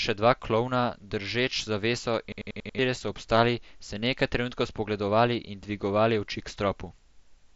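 A rapid machine-gun stutter takes over from 2.32 to 2.79 s, right after "dva klovna držeč zaveso": a single 93 ms fragment repeats five times at about 10.8 Hz. This is a system hang loop. The machine stalled while the hardware kept replaying one buffer, which fits a 4096-sample buffer, and about half a second of speech is lost. The mSBC headset band limit near 7.7 kHz stays audible throughout.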